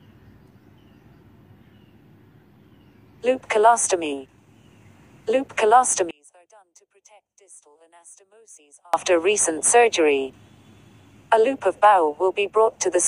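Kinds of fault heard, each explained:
One channel inverted: From 6.11 to 8.94 s the sound drops by about 33 dB. Likely one channel's polarity is reversed, so shared content cancels when summed to mono.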